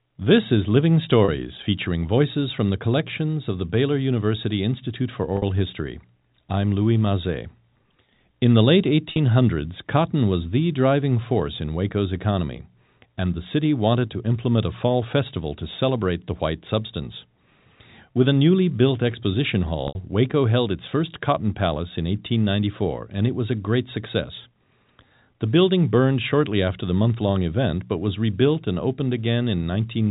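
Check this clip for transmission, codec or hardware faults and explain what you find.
There's one fault here, packet loss with pitch repetition, turning up four times. At 1.25 to 1.28 s, just before "featuring voices from the", about 30 ms goes missing. At 5.37 to 5.42 s it's 50 ms. At 9.10 to 9.18 s, right after "the late", 60 ms is lost in bits scattered over 80 ms, the longest run being 40 ms. At 19.88 to 19.95 s, after "newly built exposition", it's 70 ms. The receiver fills each hole by looping the last pitch period and fading it out, so you hear a brief buzzy hold on the sound. The longer gaps fade towards silence before the speech cross-fades back in. Those lengths fit 10 ms packets being dropped. The G.711 mu-law telephone coding underneath carries the usual narrow phone band.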